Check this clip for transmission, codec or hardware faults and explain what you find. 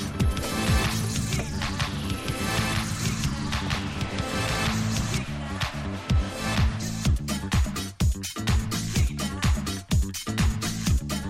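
One fault is present: a doubled audio track, already under way when the clip begins and running until 5.18 s. Throughout that stretch a second, full-band copy of the sound trails the original by about a second and a half at roughly equal loudness, with no decay or room colouring, so everything is heard twice. At 5.18 s the echo stops abruptly. The likely cause is the same signal being picked up again through a slower path, or an edit holding two offset copies.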